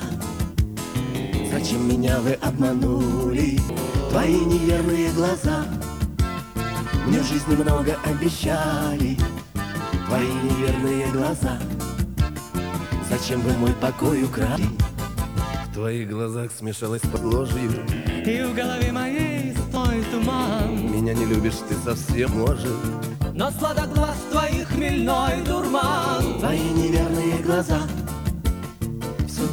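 Damaged data in a compressed stream throws the decoder out of sync at 3.69, 14.56, 17.16, 19.76 and 22.27 s, each time leaving a brief chirp or blip.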